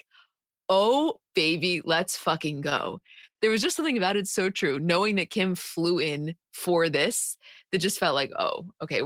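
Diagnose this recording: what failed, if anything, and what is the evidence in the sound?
Repeated stalls (stutter) from 2.55 to 3.69 s, just after "oh baby let's" and before "something about it so": a network fault. Packets arrived late, so the jitter buffer kept running dry, and the receiver stretched the last sound across eleven brief gaps, the longest 52 ms. Nothing is lost, but the speech drags.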